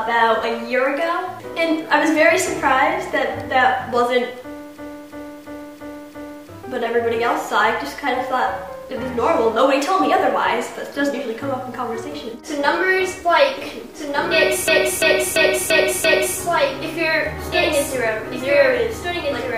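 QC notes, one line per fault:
4.78–6.49 s and 14.68–16.38 s, system hang loop: in each span a 341 ms piece of audio repeats exactly five times, at about 2.93 Hz, before playback resumes with little or nothing missing. The loop length fits a 16384-sample ring buffer that the hardware kept replaying while the system stalled. The identical slices create a rhythmic stutter. On a waveform, the same block tiles five times in a row. A spectrogram shows vertical seams at each repeat.
13.57 s to end, doubled audio track: from 13.57 s a second full-band copy of the audio runs about 1.5 s behind the original and about 5 dB quieter. It cuts in abruptly and continues to the end. The likely cause is either a second, slower capture path or an edit that left two out-of-step copies. It has no decay or room colour. On a spectrogram, every feature reappears 1.5 s later, fainter and otherwise unchanged.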